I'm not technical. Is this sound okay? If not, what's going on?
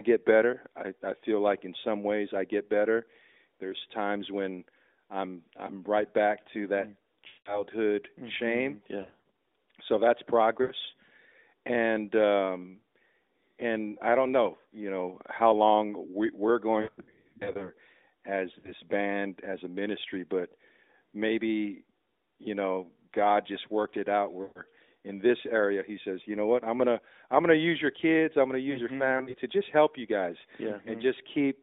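No. The radio link dropped short bursts of data, causing lost AMR speech frames at 7.3, 9.0, 10.6, 16.8 to 17.7, 18.6, 24.4 and 29.2 seconds. The phone fills each gap by stretching out the last sound while fading it, so speech briefly smears, warbles or drops out, then returns weak or rough for a moment.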